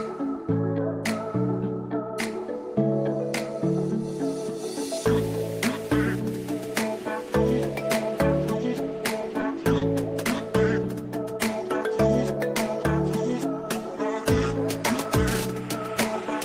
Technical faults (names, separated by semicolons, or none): short stall from a late packet